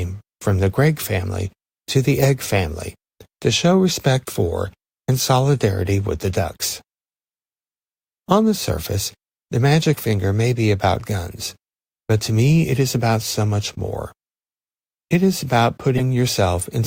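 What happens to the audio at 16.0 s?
A corrupt frame decoded from 15.97 to 16.01 s: flipped bits in a couple of compressed frames were played anyway, so misread gains and codes put energy at the wrong frequencies, heard as a short, loud chirp, squeak, blip or burst of noise, peaking around -5 dBFS.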